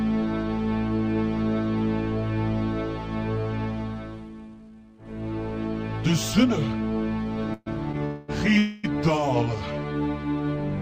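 Three short stalls at 7.53 to 7.68 s, 8.05 to 8.30 s and 8.58 to 8.85 s each stretch the last sound into a fading buzz, the first settling into brief silence. These call audio freezes likely come from a jitter buffer running dry, inserting gaps of about 130, 230 and 250 ms without losing audio.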